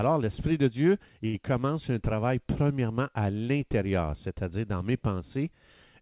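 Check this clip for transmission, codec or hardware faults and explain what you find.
One transmission fault appears in this speech, heard through a narrowband call path with nothing above 4 kHz, as G.711-style telephone coding would produce.

At 1.26 to 1.35 s there is a short stall from a late packet. A packet missed its playout time, the jitter buffer ran dry, and the receiver stretched the last sound for about 72 ms before resuming where it left off. Nothing is lost, but that sound hangs slightly too long, with a faint buzzy dip.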